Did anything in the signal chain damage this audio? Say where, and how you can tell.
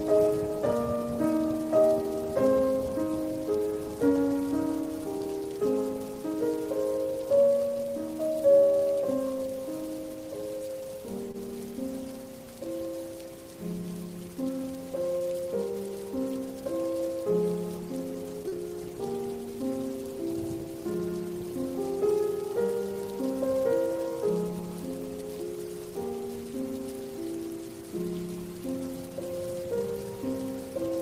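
Yes, two network faults reached the decoder side. The first is a short stall from a late packet at 11.31 to 11.37 s. The jitter buffer ran dry, so the receiver stretched the last sound for about 25 ms until the packet turned up, then resumed exactly where it had stopped. You hear a held, faintly buzzy sustain with nothing skipped. Everything after it runs 25 ms later. That retained content and added delay separate it from a loss.

The second is short concealed packet loss at 18.48 to 18.55 s. Here about 40 ms of audio never arrived. The decoder bridged the gap with roughly 36 ms of extrapolated sound, continuing the preceding pitch or shaped noise before crossfading back into real signal. The result is a brief smear or wobble. Unlike the stall, material is genuinely gone, and the timeline closes up rather than shifting later.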